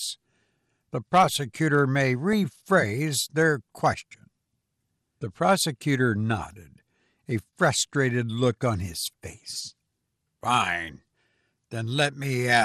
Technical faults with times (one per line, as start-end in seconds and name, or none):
0.00-12.64 MP2 compression
2.33 DAB burbling
12.21-12.24 DAB burbling